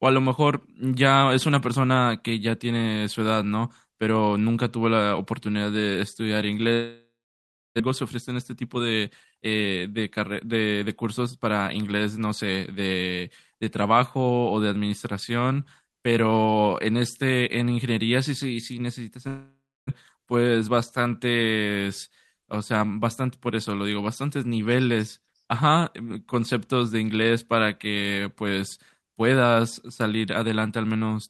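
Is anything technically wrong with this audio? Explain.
Yes. The speech has two gaps and several stretches where its pace shifts.

From 6.73 to 7.82 s, and again from 19.28 to 19.91 s, the sound trails off into a fading buzz and then goes silent for about 0.67 s and 0.29 s. About 0.6 s of speech is missing each time. This is likely a long network dropout: no packets arrived, so the receiver stretched the last sound until it gave up.

From 7.85 to 11.47 s the speech sounds hurried while the pitch stays the same. It runs at 111% speed, and roughly 0.4 s is trimmed away. This is a jitter buffer speed-up: the buffer held more audio than it aims for, and the receiver cut out short pitch-period pieces to shed the excess delay. A brief rush at 113% from 20.47 to 20.69 s removes roughly 40 ms more.

From 20.16 to 20.40 s the speech drags, at 87% speed with 39 ms added. This is a jitter buffer slow-down: the buffer was running low or had just raised its target delay, so the receiver repeated single pitch periods to build a reserve.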